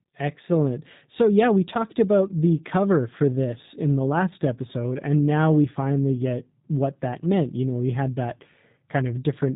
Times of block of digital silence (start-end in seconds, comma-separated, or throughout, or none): none